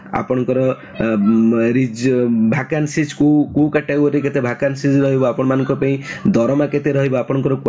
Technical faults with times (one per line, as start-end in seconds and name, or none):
0.00-7.69 gain pumping